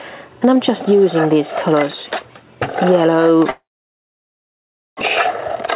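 At 3.5 s the sound stalls into a brief fading buzz, then silence until 5.03 s. About 0.9 s never returns, likely a long network dropout.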